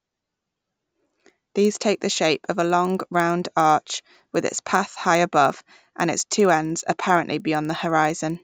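From start to finish the speech carries a resampler restarted on every block fault. The sound points to a conversion from 16 kHz up to 48 kHz done in 50 ms blocks, each processed on its own, so every block edge carries a small error. The result is a ticking at 20 Hz that becomes a low buzz under the speech and drops away in pauses. On a spectrogram it appears as thin vertical lines every 50 ms, visible only where signal is present.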